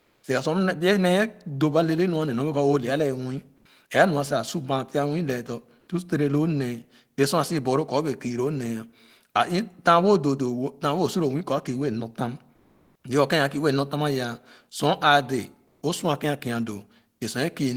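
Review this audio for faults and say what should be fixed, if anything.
Comfort noise in place of the background at 0.0–0.19 s, 12.55–13.03 s and 15.67–15.79 s swaps the real background for steady, featureless hiss, about 3 dB quieter, then about 10 and 2 dB louder. The likely cause is discontinuous transmission in an Opus-type codec. Unlike a gate or dropout, the pause fills with noise rather than silence. Disabling DTX on the sending side prevents it.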